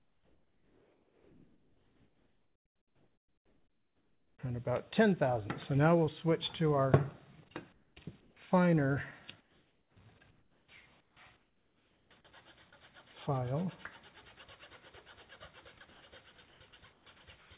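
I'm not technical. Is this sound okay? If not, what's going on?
No. During the quiet stretches, at 0.0–4.39 s, 7.73–8.37 s, 9.41–12.1 s and 15.9–17.5 s, the real background becomes a flat hiss, quieter in the first stretch. That is comfort noise in place of the background, likely because the call stopped sending audio during pauses.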